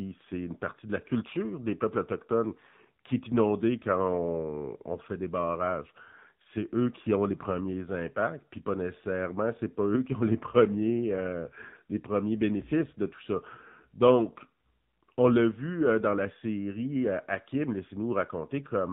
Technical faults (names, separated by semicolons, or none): AMR narrowband mobile codec